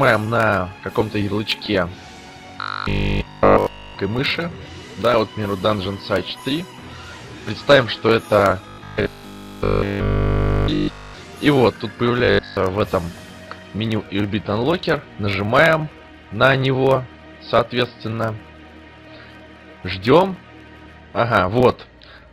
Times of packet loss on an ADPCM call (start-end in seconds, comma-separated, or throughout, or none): none